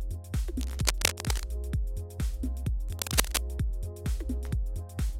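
Cable scratch noise hits from 0.61 to 1.46 s and again from 2.89 to 3.39 s, rustly bursts about as loud as the sound, likely a worn connector being moved.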